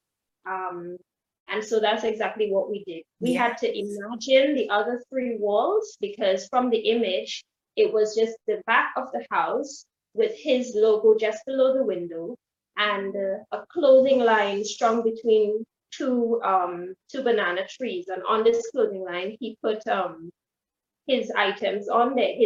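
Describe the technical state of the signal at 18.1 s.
The signal at 18.1 s is intact, with no dropout, distortion or other technical fault to be heard there.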